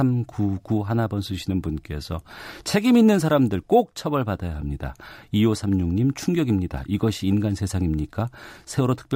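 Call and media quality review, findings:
Crude rate conversion, whole clip. Gritty, inharmonic fizz trailing louder and brighter speech, roughly 30 dB below it. Resampler repeating nearest samples without filtering; the 3:2 repeat pattern fits 32 kHz to 48 kHz. Spectrogram: faint mirrored images above 16 kHz, unrelated to speech harmonics.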